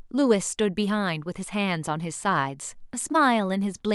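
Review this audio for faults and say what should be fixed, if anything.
A short concealed section hits the speech from 3.12 to 3.15 s, about 34 ms. This is a corrupt frame concealed: bit errors damaged the AAC data, which fits two frames, and the decoder detected them and covered the gap itself. To prevent it, protect the stream with error checking and retransmission or forward error correction so damaged frames are recovered.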